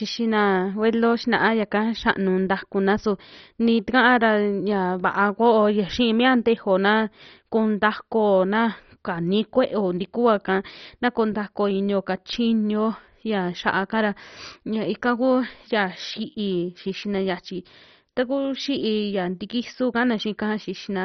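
From start to finish the speech has nothing above 6.1 kHz, and what remains sounds dull, granular and gurgling, with bands flickering in and out. The likely cause is heavy MP2 compression, which fits a bitrate near 32 kbps starving the upper sub-bands of bits.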